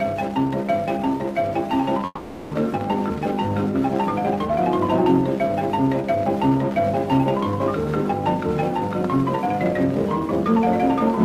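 A long network dropout runs from 2.05 to 2.53 s. The sound at the point of loss is stretched forward as a fading buzz for about 460 ms, sinking into roughly 20 ms of silence before the audio resumes. What arrives afterwards carries on from a later point, so about 460 ms of material is simply gone. This is likely a gap in delivery that the receiver papered over by extending the last sound it had.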